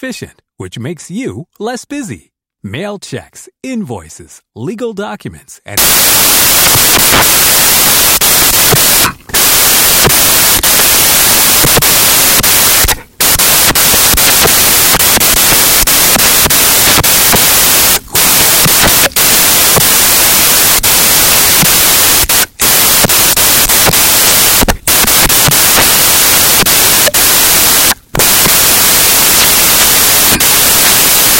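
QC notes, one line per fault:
5.77–31.39 s, samples built from the wrong bytes: right after "checks invoices legal documents" the reader begins assembling each sample from misaligned bytes, either shifted by one or in swapped order, and stays that way to the end of the clip. The rapidly fluctuating low-order bits now land in the high-order position, so the speech turns into loud, harsh broadband noise.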